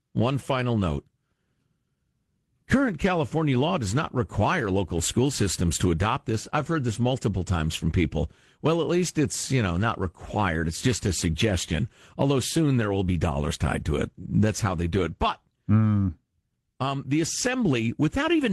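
A speech recording with no technical faults to report.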